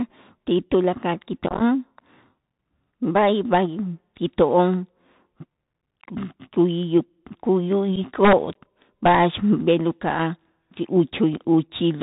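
Throughout, the speech passes through a Bluetooth CVSD headset codec whose one-bit delta coding at 64 kbps cuts everything above 4 kHz, roughens s sounds and leaves granular hiss.

Just after "ti tulakal", from 1.46 to 1.63 s, unconcealed Bluetooth headset packet loss removes about 79 ms in scattered gaps up to 22.5 ms long, which fits around twenty dropped packets. The result is chopped, crackly speech with abrupt edges.

Shorter single dropouts follow at 7.96 s and 11.36 to 11.41 s.

From 8.25 to 8.33 s, integer overflow wraps loud peaks to the opposite sign, producing harsh cracks much sharper than ordinary clipping.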